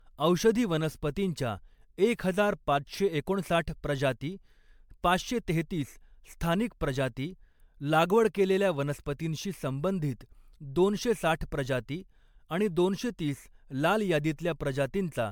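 Throughout the speech the sound is swirly, smeared and hollow, with blurred consonant attacks and nothing above 20 kHz, more degraded than a single MP3 pass near 128 kbit/s would leave. This is generation loss, likely from around seven successive re-encodes, each requantising on a shifted frame grid.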